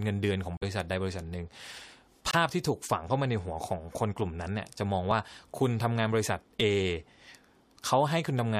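At 0.57 to 0.64 s and again at 2.31 to 2.35 s the speech cuts abruptly to silence, a corrupt frame muted: the decoder rejected damaged compressed frames and the player filled silence. The longer gap fits several frames, the shorter one frame. Timing holds, unlike a skip.

At 5.11 s and 6.60 s a repeated buffer occurs: audio arrived late, so about 5 ms was played twice at 5.11 s and three times at 6.60 s. At this size it is a click or tiny buzz, not silence, with nothing lost.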